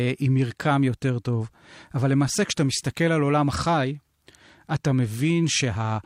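A speech recording with no technical faults to report. Nothing in it needs a time, a value or a cause.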